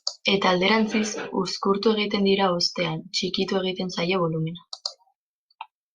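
No technical faults can be heard in this speech recording. There is no point anywhere in the audio that needs to be marked.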